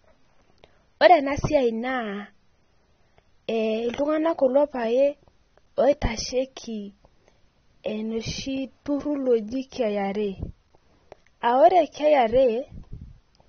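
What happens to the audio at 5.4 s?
At 5.4 s the speech carries AAC compression damage, and it runs through the whole clip rather than starting there. Nothing is left above 6.3 kHz, so the sound is dull and muffled. The damage is plainly audible. Sustained sounds warble and sibilants turn fizzy and smeared. This is likely an AAC-LC encoder working at a low bitrate, consistent with about 24 kbps. It cuts high frequencies and quantises the rest coarsely against a hearing model.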